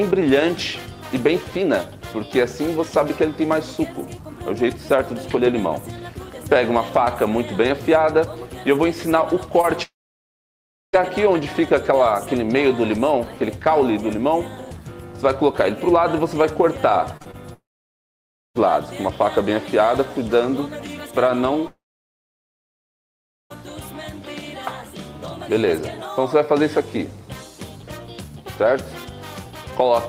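At 9.61 s, a short concealed packet loss fills about 20 ms with continued sound, heard as a brief smear. On a spectrogram it shows as a soft blurred seam. From 9.83 to 10.95 s comes a long network dropout, likely from packets not arriving in time. A fading buzz or hiss gives way to about 1 s of silence, which appears as a flat stretch on the waveform and an empty gap on the spectrogram. Three more short concealed losses at 17.17, 17.22 and 17.31 s, each 20 to 40 ms, cause a quick wobble. Dropouts recur from 17.53 to 18.57 s, with about 0.94 s silent, and from 21.67 to 23.52 s, with about 1.73 s silent. Each shows a decaying tail into a flat trace.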